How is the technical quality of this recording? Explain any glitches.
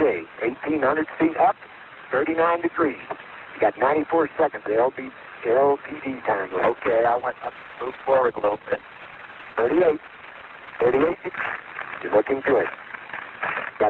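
The recording has one clear fault, a call bitrate drop in the second half. Before it, the call path's normal Opus coding is present, with the top end stopping at 12 kHz.

Call bitrate drop, 6.49 to 13.21 s: the call's bandwidth estimate fell and the encoder was starved of bits, consistent with a drop from about 40 kbps to roughly 9 kbps. Coding turns coarse and rough, and the audio bandwidth narrows from 12 kHz to 8 kHz, leaving the sound muffled, bottoming out for about 4.65 s before recovering.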